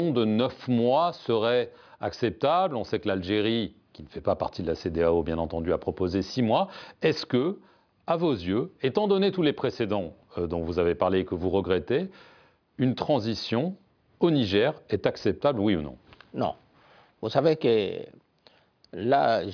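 Nothing technically wrong can be heard anywhere in this audio. No fault appears at any point, so there is no time or cause to report.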